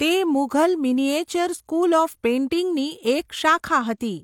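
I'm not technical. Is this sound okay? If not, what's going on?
Yes, nothing stood out as a problem while listening to this speech recording.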